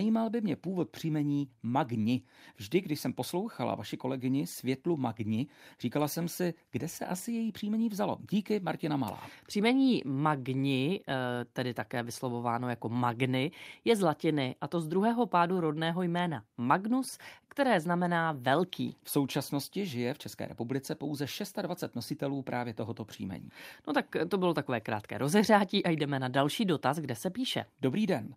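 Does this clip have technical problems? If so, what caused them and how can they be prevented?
No, there's no technical fault in this speech clip, so there's nothing to trace back or prevent.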